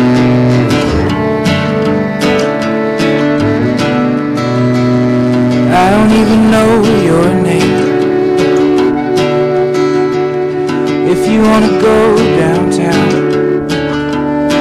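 Hard clipping runs throughout: the signal is driven about 13 dB past the stage's limit, so peaks are flattened on roughly a tenth of samples, giving harsh fuzz on every loud passage.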